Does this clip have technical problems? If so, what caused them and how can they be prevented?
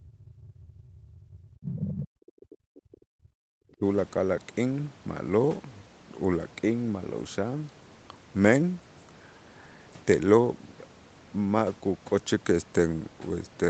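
Yes. Speech suppressed in double talk occurs at 0.0–0.87 s, 1.16 s, 1.78–3.27 s and 3.78–3.84 s. The level falls by up to about 40 dB, likely because the echo canceller attenuated the line while both sides spoke. On a spectrogram it appears as sudden dark gaps, and on the waveform as collapsed envelopes. Prevention: use a canceller with better double-talk detection, or have this side use headphones.

The other side's voice leaking through occurs at 1.62–1.84 s and 2.02–2.08 s, about 10 dB below the speech. It is likely residual loudspeaker echo the canceller missed, and it shows as weaker energy under the main trace. Prevention: use headphones, or lower the speaker volume and move it away from the microphone.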